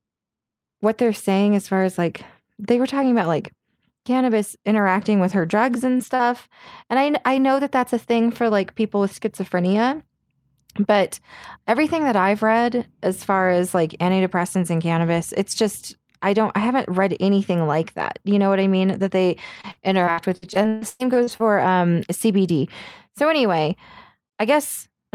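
Lost packets rebuilt from error correction occur as a cluster of brief patches between 5.29 and 6.21 s, each about 20 ms long and spaced roughly 20 to 200 ms apart. Each missing packet was recovered from a low-bitrate copy carried in the following packet, so the speech never breaks. Those 20 ms slices come through rougher and grainier than the surrounding audio.

Short concealed packet loss appears inside that same cluster, at 5.97 to 6.01 s and again at 6.15 to 6.21 s. About 20 ms is missing the first time and about 40 ms the second, and no recovery copy arrived in time. The decoder extended the preceding sound to bridge each hole, then faded back into the real signal. The result is a momentary smear or wobble, and a quick consonant there could slip away.

Repeated packet loss (robotic sound) runs from 19.55 to 21.42 s. Packets went missing again and again, leaving about a dozen holes that add up to roughly half a second, with the longest around 129 ms. 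Concealment covers about 28% of that stretch. Each gap is patched by continuing the last sound, and the next gap arrives before the speech can recover. The passage sounds choppy, with fragments dropping out.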